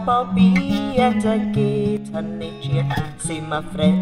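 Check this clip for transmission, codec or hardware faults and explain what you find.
One fault is audible: a brief, abrupt drop in level that points to one channel dropping out. From 1.97 s to 2.14 s, about 0.17 s, the whole sound falls by about 6 dB and then snaps back. The likely cause is one stereo channel going silent. After the mono sum, anything shared by both channels loses half its contribution, and anything present only in the missing channel vanishes. On a waveform this appears as a sudden, flat-edged step down in amplitude. On a spectrogram it shows as a uniformly dimmer vertical band across all frequencies, with sharp edges at both ends.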